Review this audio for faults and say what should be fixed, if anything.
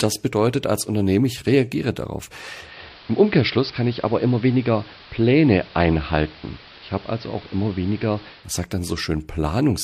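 Digital radio blending to analogue, 2.59 to 8.53 s, from "ich reagiere darauf" to "sagt dann": 228 ms cross-fades into AM, about 2 dB quieter, hiss about 25 dB below the signal; smooth fades, unlike dropouts. Prevent it by improving digital reception or disabling the receiver's analogue blend.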